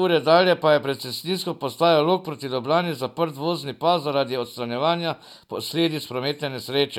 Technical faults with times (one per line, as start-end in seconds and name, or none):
none